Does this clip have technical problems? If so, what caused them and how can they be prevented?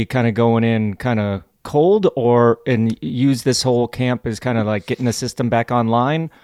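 No, nothing stood out as a technical problem when listening to this speech clip.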